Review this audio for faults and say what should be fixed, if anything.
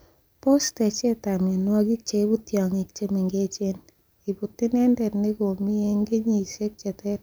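No faults turn up in this audio, so nothing needs to be fixed.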